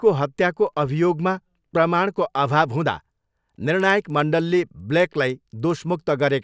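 From 3.7 s to the end, the speech carries regular ticks at 10 per second. This is a resampler restarted on every block. Each 100 ms block was converted from 44.1 kHz to 16 kHz in isolation, so every block edge gets a small error. The ticks follow the speech and drop away in pauses.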